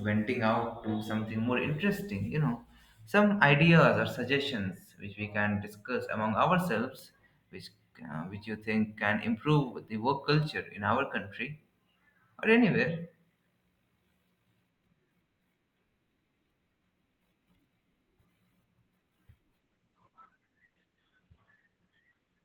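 At 6.99 s a single sharp tick cuts through the speech: a bit error spike. One bit in one sample flipped, so that sample's value leapt by a power of two and snapped straight back. Because it is one isolated sample, the tick is broadband and bears no relation to the speech around it. Unlike a dropout or splice click, there is no gap, no level step and no repeat.

From 19.6 s to the end, the speech abruptly loses its clarity. This is an adaptive stream at a lower bitrate: the player switched to a cheaper version of the stream, and what we hear fits a fall from about 64 kbit/s to around 12 kbit/s Opus. Codec artefacts grow. It differs from packet loss because there is no silence or stutter, only a sudden, sustained drop in quality with seamless playback.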